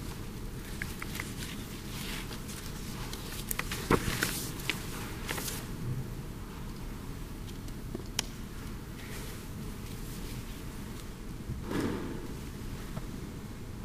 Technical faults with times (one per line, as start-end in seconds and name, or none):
11.04-13.84 periodic clock jitter